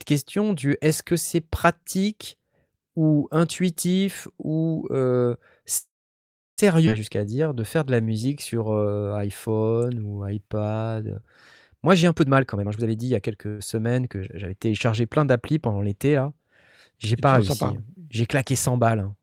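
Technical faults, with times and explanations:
5.77–6.60 s, call audio freeze: packets were likely held up and the jitter buffer ran empty after "ou intuitif ou euh". The last sound trails off into about 0.7 s of silence, inserting 0.8 s with nothing lost.
6.86–6.89 s, skip ahead: roughly half a second of audio was dropped while later audio waited, so playback jumps forward and both sides join almost directly.
7.19–11.2 s, jitter buffer slow-down: to rebuild its reserve the buffer repeated pitch periods, adding 529 ms. The speech runs at 87% speed, drawn out at unchanged pitch.
11.87–13.48 s, jitter buffer speed-up: excess buffered audio was trimmed by removing short pitch-period pieces, about half a second in total. The speech runs at 135% speed, hurried but at the same pitch.
13.48–13.61 s, call audio freeze: a brief packet stall likely empties the buffer again, and 105 ms of continued sound fills the wait with no silence before "semaines que j'avais téléchargé" resumes intact.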